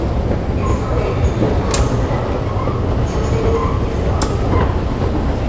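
No technical faults are audible.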